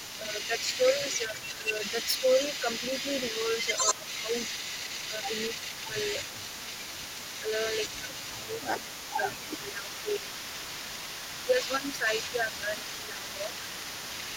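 It's a speech recording with an echo leak running the whole way through: a delayed copy trails the talker by about 188 ms, sitting roughly 10 dB down, most likely a far-end echo canceller letting loudspeaker pickup slip back. There's also speech suppressed in double talk at 0.2–2.68, 3.65–4.34, 5.1–5.96, 7.41–10.68 and 11.44–13.53 s, where the voice ducks by a few dB, up to around 10 dB in the second and fourth stretches, likely as the canceller clamps down while both sides overlap.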